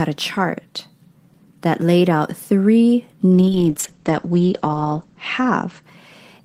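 From 3.35 s, right after "that laid out three", the speech turns rough and muffled, with a coarse, watery texture, and it stays that way to the end at about 6.4 s. The top of the spectrum goes as well, from around 20 kHz down to 8 kHz. This is a call bitrate drop. The bandwidth estimate fell, so the encoder coded with far fewer bits and trimmed the highs. The sound is consistent with a fall from about 32 kbps to roughly 9 kbps, held at its worst for about 1.63 s.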